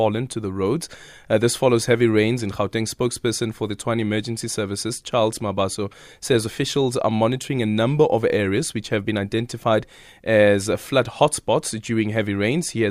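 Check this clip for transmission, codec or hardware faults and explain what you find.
I found no faults to report in this clip.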